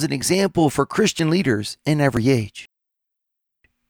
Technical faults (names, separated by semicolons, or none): audio missing between chunks